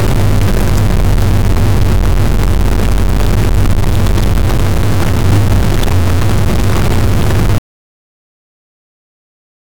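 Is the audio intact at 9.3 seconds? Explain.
No. At 9.3 seconds the sound is gone. An audio dropout to silence begins at 7.58 s and lasts to the end of the clip. The sound cuts off abruptly and never returns. The gap is silent, with no room tone or background hiss at all. That points to lost input while writing continued with silence. The likely cause is a disconnected device, a failed link or an accidental mute. Whatever happened in that stretch is not recoverable.

The moment also falls within a stuck bit fault that runs through the whole clip. Throughout the clip, one data bit seems fixed at 0 or 1, likely from a broken data line or converter. Roughly half the samples are then off by that bit's weight. This adds a grainy or buzzy distortion that follows the waveform. Quiet passages fill with noise.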